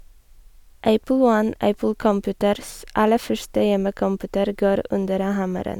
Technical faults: none

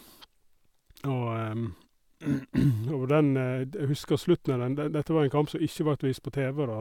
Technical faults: none

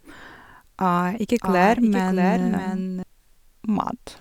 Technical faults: doubled audio track

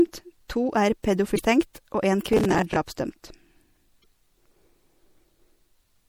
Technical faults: MP3 compression; damaged data in a compressed stream; processor overload crackle

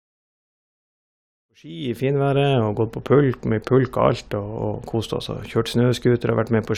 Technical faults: none

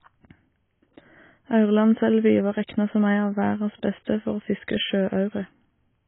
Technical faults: low-bitrate audio saved at a high bitrate

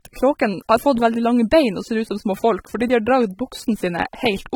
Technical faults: low-bitrate audio saved at a high bitrate

